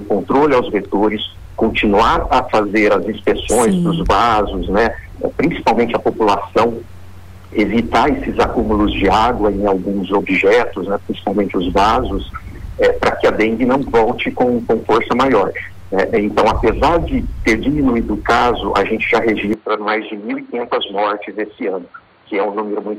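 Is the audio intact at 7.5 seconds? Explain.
Yes, the audio is intact at 7.5 seconds, with no dropout, click, distortion or other fault there.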